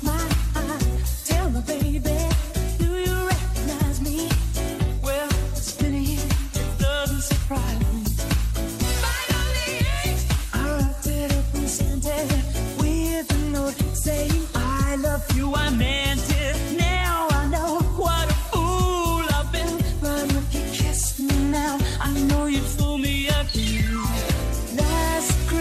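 Throughout, the audio sounds dull, with a gurgling, granular grain. The likely cause is MP2 compression at a low bitrate, which fits around 80 kbps. Too few bits reach the upper sub-bands. They switch off and flicker, and the remaining bands are coarsely quantised.

At 0.97 s there is a brief burst of DAB burbling. Bit errors slipped past error correction into the MP2 data. Wrong samples put short blips of noise in single sub-bands. The sound points to a few damaged frames at a low error rate.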